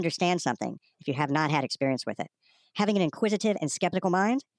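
Wrong sample rate, throughout the clip: the speech runs about 1.38 times too fast and sits roughly 5.5 semitones high, which fits 16 kHz audio played back at 22 kHz without conversion. Speed and pitch rise together, so voices sound chipmunk-like and hurried.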